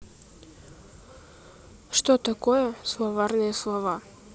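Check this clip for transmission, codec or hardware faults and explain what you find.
No faults detected in transmission.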